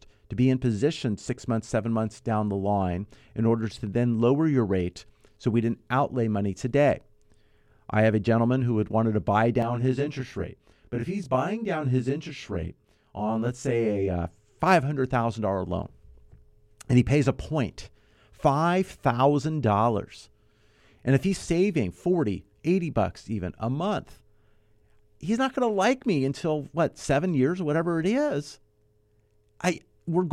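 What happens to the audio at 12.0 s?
At 12.0 s the speech sounds rough and slightly doubled. This runs from 9.62 s, just after "had wanted to buy", to 14.22 s. It is channel delay (comb filtering): one channel lags the other by around 20 ms, and when the two are summed to mono, shared content cancels at regularly spaced frequencies. The result is a comb of fixed notches starting down around 20 Hz.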